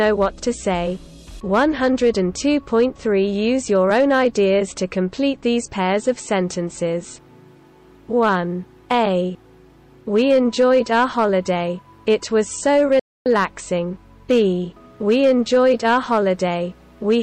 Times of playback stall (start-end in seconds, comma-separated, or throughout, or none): 12.99-13.26